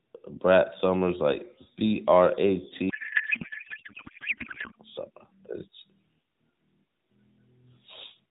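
Speech clip where, from 2.90 to 4.76 s, the speech turns to garbled warbling noise that barely tracks it: a codec payload misread, the sound pointing to octet-aligned AMR frames decoded as bandwidth-efficient. Unlike packet loss, there are no gaps, just continuous nonsense until the formats agree again. The AMR narrowband mobile codec is audible throughout as band-limiting below 4 kHz with light coding colour, which fits a 12.2 kbps mode.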